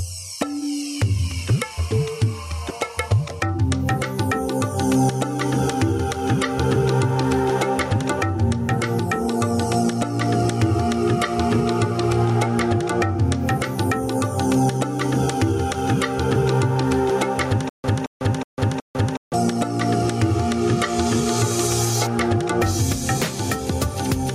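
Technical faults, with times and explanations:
Throughout: gain pumping. The level swings by around 10 dB. This likely comes from gain set far too high, with a fast limiter or compressor clamping every loud moment and squashing the dynamics.
17.69–19.34 s: stutter with silent gaps. A 221 ms fragment repeats 4 times, each followed by about 149 ms of silence, at an even 370 ms period. This is likely a stalled player or stream replaying its last fragment on each retry before running empty, so the intended audio is lost.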